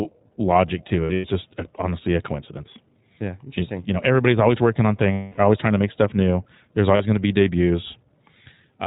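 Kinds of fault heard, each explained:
iLBC codec: The speech was carried through the narrowband iLBC VoIP codec, which fits a 15.2 kbps setting with 20 ms frames, each coded independently. Nothing above 4 kHz survives, and the coding damage is plainly audible as a rough, slightly synthetic edge on the voice throughout.
Lost iLBC frames: Packets went missing, and the decoder filled each gap by repeating the last pitch cycle blended with noise. This is heard as a held, buzzy vowel: scattered losses over 200 ms from 1.04 s, with the longest run about a tenth of a second, a 260 ms fill from 5.12 s, and a brief 40 ms one at 6.96 s. Each recovers almost immediately.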